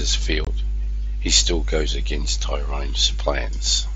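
At 0.45 to 0.47 s the speech drops out for about 22.5 ms. This is unconcealed Bluetooth headset packet loss. Voice packets between headset and phone never arrived, and nothing was done to fill the gap. Silence or an idle pattern took their place. The hole has hard edges. The length fits about three lost packets. Around it, the mSBC link carries speech up to 8 kHz with a faint grain.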